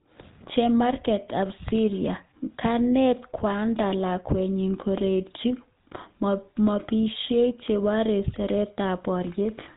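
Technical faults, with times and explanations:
Throughout, GSM full-rate codec: the voice has a buzzy, gravelly edge and nothing above 4 kHz, fitting 13 kbps pulse-excited vocal-tract coding that discards most excitation detail.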